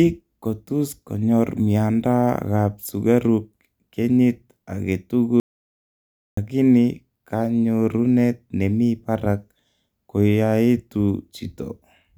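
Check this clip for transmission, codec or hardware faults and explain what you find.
There is one fault, an audio dropout to silence. The speech cuts off at 5.4 s and returns at 6.37 s, leaving a gap of about 0.97 s that is silent, with no room tone or background hiss at all. The likely cause is that the input was lost, through a disconnected device, a failed link or a brief mute, while writing carried on with silence. Whatever was spoken in that second is gone. A natural pause would keep the room's noise floor, and packet-loss concealment would fill the gap with smeared or repeated sound rather than dead silence.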